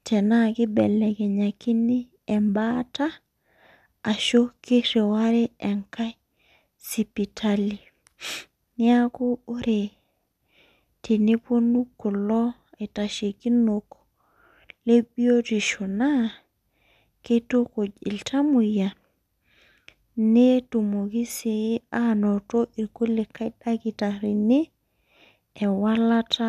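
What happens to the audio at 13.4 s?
At 13.4 s the speech carries on intact, with no dropout, click, distortion or other fault at that point.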